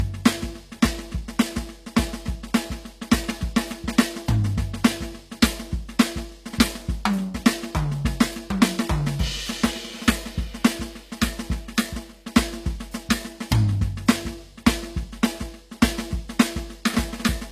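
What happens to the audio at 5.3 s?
At 5.3 s the music sits under the same hard ceiling that runs through the whole clip, with nothing above 14.9 kHz, so the top end sounds dull. This is likely low-bitrate audio saved at a high bitrate: the later high-rate MP3 cannot restore what an earlier low-rate encode removed. A spectrogram shows the energy stopping at a flat horizontal edge.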